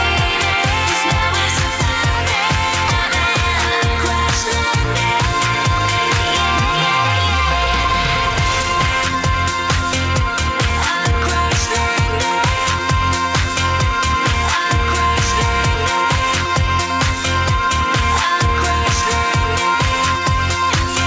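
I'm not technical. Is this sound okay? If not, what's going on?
No. At 2.88 s there's a skip ahead: roughly a second of audio was dropped, so playback lurches forward and the sound on either side is stitched together with almost no gap, leaving that second simply missing.

There are also two stretches of jitter buffer speed-up. The receiver had built up more waiting audio than it wanted, so it kept snipping out tiny slices to catch up. From 7.67 to 11.67 s the sound runs 5% fast, losing roughly a fifth of a second in total; from 12.40 to 14.69 s it runs 2% fast, losing only a little. The pitch stays the same, but the first of those parts sounds slightly rushed.

Throughout, the call's sound also stops at 8 kHz, as the call connection normally does.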